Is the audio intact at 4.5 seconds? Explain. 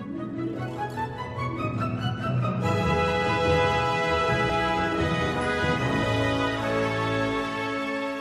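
No. At 4.48 s the audio jumps ahead about a tenth of a second: compressed frames skipped, consistent with several lost 23 ms frames.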